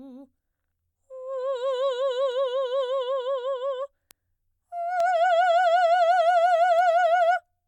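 From 0.53 s to 6.79 s the music carries sharp ticks, about seven of them, spaced roughly once a second and as regular as a metronome. These are word clock ticks. The receiving device is running on its own clock rather than locking to the sender's over the digital link, and the two differ by roughly 20 parts per million. Each time the clocks drift a full sample apart, one sample is dropped or repeated and the surrounding samples are misread, which produces a tick.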